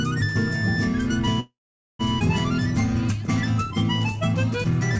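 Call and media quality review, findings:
Call audio freeze, 1.40–2.01 s: the last sound is held, then about 470 ms of silence before playback resumes intact. Likely packets delayed and jitter buffer ran dry, inserting a 594 ms gap.

Skip ahead, 2.19–2.22 s: roughly 0.4 s of audio is dropped, with an 11 ms join, so playback jumps forward. A stretch was dropped while later audio was already waiting.

Jitter buffer slow-down, 3.64–4.19 s: audio is drawn out at 93% speed with pitch unchanged. Pitch periods were repeated, adding 49 ms to rebuild the buffer reserve. The audio is band-limited, with nothing above 8 kHz, which fits a G.722 call path.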